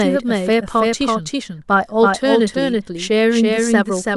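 From start to finish the speech carries a doubled audio track: a second full-band copy trails the original by roughly a third of a second, at about the same level. It's clean and dry, with no decay or room colour, so it reads as a hard, stuttering repeat rather than an echo. That points to the same signal likely getting mixed in twice, say via a slower second capture path or two copies left out of step in an edit.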